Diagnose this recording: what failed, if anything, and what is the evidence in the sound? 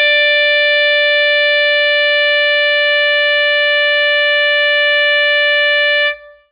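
The music sounds dull and watery from start to finish, with nothing above about 4.9 kHz and a swirling, unstable texture as weak spectral detail flickers in and out. This is likely heavy MP3 compression at the codec stage, at a very low bitrate near 16 kbps.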